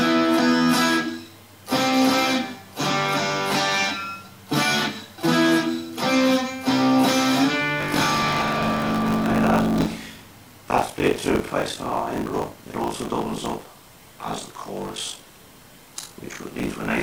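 From 7.8 s, buffer tearing begins. Writer and reader have slipped, so about half of each buffer replays older audio. It sounds like a robotic 50 Hz buzz.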